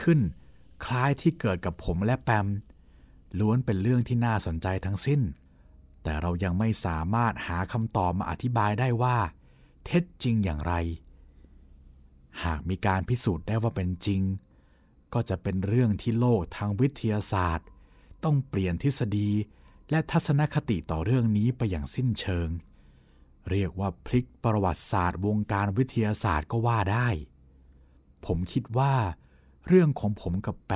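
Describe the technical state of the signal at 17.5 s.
No fault is present at 17.5 s, and the speech signal is intact at that moment.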